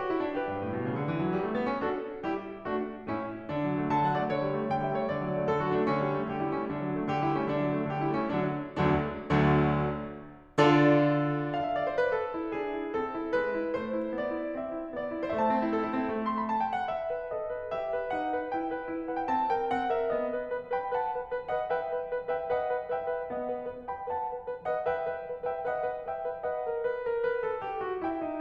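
No technical faults are audible anywhere in the music.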